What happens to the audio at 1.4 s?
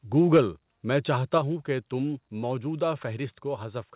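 Right at 1.38 s, between "میں چاہتا" and "ہوں کہ تم موجودہ", the speech and background suddenly sit about 4 dB quieter. That's likely a microphone volume stepped down by the call software, which cut the input gain in a single step.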